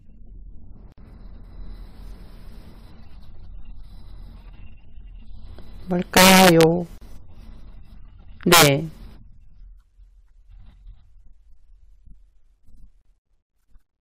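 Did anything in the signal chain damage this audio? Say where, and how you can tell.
Yes. At the codec stage, the speech was encoded in separate pieces, roughly 6 s long, and joined without trimming each run's start-up delay and end padding. That leaves a gap at each join of encoded pieces: a dropout of about 56 ms at 0.92 s, and about 37 ms at 6.98 s and 13.01 s. Each is a hole with smeared edges, after which the sound resumes exactly where it stopped.

An integer overflow occurs in a fixed-point gain or summing stage. Between 6.17 and 6.63 s, and again between 8.52 and 8.68 s, the signal is pushed about 5 dB past full scale. The arithmetic does not saturate, so every peak over the limit wraps around to the opposite sign and jumps across the whole range. The loudest moments therefore turn into harsh, violent cracks, much sharper than ordinary clipping.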